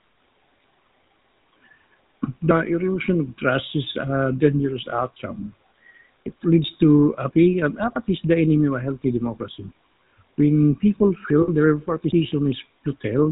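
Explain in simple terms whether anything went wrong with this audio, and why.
Several things went wrong here.

The whole recording has passed through the GSM full-rate codec, an early mobile-phone speech coder. It rebuilds the voice from a simplified model, so everything sounds buzzy and gravelly, and nothing above 4 kHz survives. That gritty texture is what separates it from ordinary muffled telephone sound.

From 11.42 to 11.49 s there are lost GSM frames. For those 60 ms the phone had no good data, so it kept replaying the last good piece. You hear a brief rough, metallic ring where the sound seems frozen, not a gap of silence.

At 12.11 s there is audio missing between chunks. Roughly a fifth of a second vanishes, and the sound on either side is butted straight together, so it jumps forward abruptly. Unlike the frozen ring before it, nothing is held or repeated. The likely cause is a recorder working in 5-second chunks that dropped a sliver while switching chunks.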